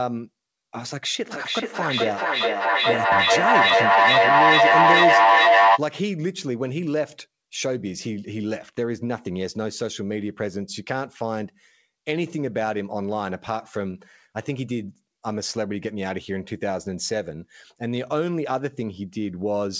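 From 1.31 s to 5.85 s there is a feedback echo between two devices. A second device in the same room replays the call audio, the first device's microphone picks that up and sends it back, and neither echo canceller removes it. Each syllable returns at a roughly 400 ms interval, thinner and more ringing on every pass, and the repeats build rather than decay, peaking at about 10 dB above the direct speech. The call path's band limit, with nothing above 8 kHz, holds throughout.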